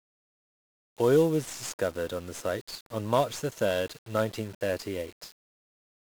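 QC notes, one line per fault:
throughout: 1-bit DFPWM compression, with each sample reduced to one up-or-down step; heavy broadband quantisation noise leaves the speech fuzzy and crackly, treble buried in hiss.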